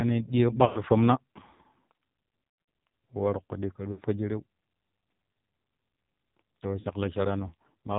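The whole thing runs through the AMR narrowband mobile codec, and at a rate that sounds like 5.9 kbps the damage is heavy. Everything above 4 kHz is gone, and the speech has that buzzy, synthetic edge you get when the vocal tract model is fed very few pulses per frame, so sibilants go dull and vowels turn reedy and artificial.

On top of that there are four spots of lost AMR speech frames, where radio errors failed the frame checks and the decoder stretched its last good pitch and tract settings with falling gain. At 0.66 to 0.80 s about 100 ms goes missing, which fits five dropped 20 ms frames, and you hear the sound smear and fade before it comes back rough. Around 2.67 to 2.69 s is the worst patch, about 200 ms lost but scattered over roughly 320 ms with the longest gap about 100 ms, so it stutters and warbles rather than going cleanly quiet. At 3.92 to 4.01 s about 60 ms drops out as a short dip, and at 6.80 to 6.87 s a 40 ms loss gives just a brief wobble.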